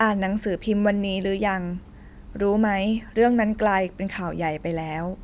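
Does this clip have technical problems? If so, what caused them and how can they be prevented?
No, nothing in this speech clip stands out as a technical problem, so there's no cause to track down and nothing that needs preventing.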